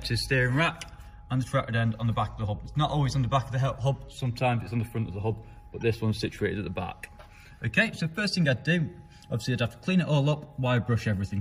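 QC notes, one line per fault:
5.81 s, corrupt frame decoded: a brief, fairly quiet glitch. Damaged frame data was decoded anyway, putting stray energy at wrong frequencies for about two frames.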